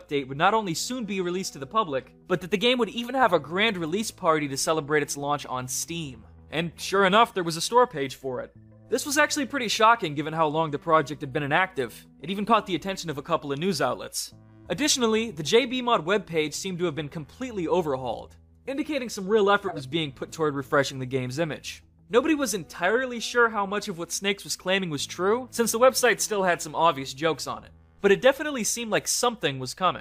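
At 9.00–9.04 s and 19.68–19.81 s, a corrupt frame decoded: damaged compressed data, one frame then about two, plays as brief chirps, blips or bursts of noise peaking near -20 and -15 dBFS.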